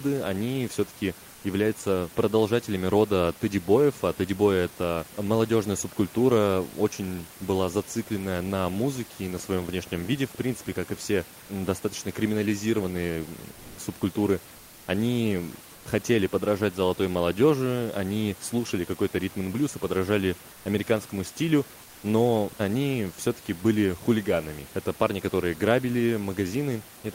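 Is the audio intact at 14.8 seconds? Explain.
No. From 14.57 to 14.87 s the room's background gives way to a flat, featureless hiss, about 2 dB quieter. This is comfort noise in place of the background, likely from discontinuous transmission, where the receiver fills a 300 ms gap with synthetic noise.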